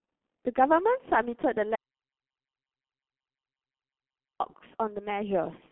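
From the start the speech has that G.723.1 codec sound: everything above 3.8 kHz is gone, leaving muffled, hoarse, smeared consonants that fit a heavily squeezed 6.3 kbit/s stream. Then from 1.75 to 4.40 s there's an audio dropout to silence, about 2.65 s of dead silence with no room tone, likely a lost input while the recording kept running.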